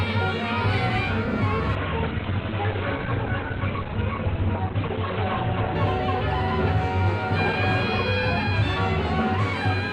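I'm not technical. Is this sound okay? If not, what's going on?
No. From 1.75 to 5.75 seconds the sound suddenly turns dull and more processed, with nothing above 4.3 kHz, then snaps back. This is an adaptive stream at a lower bitrate: the connection likely slowed, so playback briefly switched to a lower-quality version without any gap.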